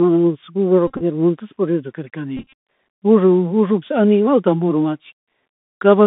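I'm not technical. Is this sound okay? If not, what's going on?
No. The whole clip is speech carried through a Bluetooth CVSD headset codec, the narrowband link a headset uses on a phone call. It sends only whether the sound should step up or down, with a step size that keeps adjusting, so nothing above about 3.6 kHz gets through and the voice sounds thin and boxed in. The damage is plainly audible: the s sounds come out scratchy, loud bright sounds distort, and a grainy hiss runs underneath the speech.

There are also two episodes of Bluetooth headset packet repeated, at 0.87 to 1.02 s and again, longer, at 2.37 to 2.53 s. In each, chunks of sound between headset and phone went missing, and the headset filled the gaps by replaying the last piece it had received. The losses come in short, scattered bursts, the longest around 30 ms, and they are heard as a brief rough buzz or stutter until clean sound resumes.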